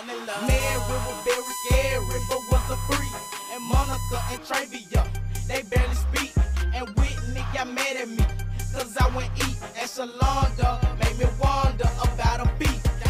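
Current drawn by the USB bus in regular 1 ms frames is leaking into the audio path through the power or ground wiring, producing USB whine from 0.60 s to 4.38 s. The result is a fixed-pitch tone at 1 kHz, which is also its strongest component. It sits only about 10 dB below the wanted sound, so it is plainly audible as a whine laid over the audio until it stops at 4.38 s.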